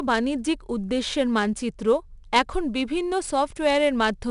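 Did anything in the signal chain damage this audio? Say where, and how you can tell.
Yes, the damage happened at the codec stage: it's 4-bit ADPCM compression, and it runs through the whole speech clip. There's a gritty hiss that rides up and down with the level, loudest on the strong syllables, and the attacks sound roughened where the adaptive step can't grow fast enough. The top end stops at about 10.6 kHz, which points to roughly a 22 kHz sample rate coded at 4 bits per sample.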